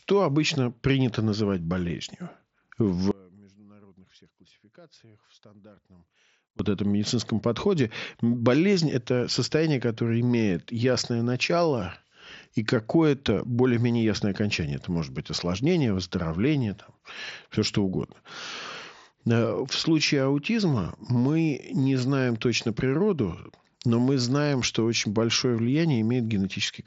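A speech clip with one audio dropout to a faint residue. At 3.11 s the speech cuts out abruptly and returns at 6.59 s, about 3.5 s later. The gap is not silent. A faint trace of the sound remains, roughly 30 dB below its normal level. The break is sudden at both ends, unlike a pause or a fade. The likely cause is the signal link failing while the path after it stayed live. The speech is band-limited to 8 kHz, as expected from the mSBC headset codec.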